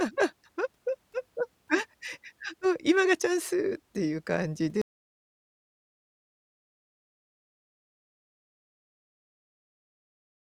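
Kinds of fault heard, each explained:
Audio dropout to silence: at 4.82 s the speech cuts off abruptly and the clip stays in silence through to the end, with no room tone or background hiss left in the gap. Nothing after that point survives, so whatever followed is simply missing. The total loss of signal, rather than a fade or a muffled stretch, points to the input most likely being disconnected or muted while the recorder kept writing silence.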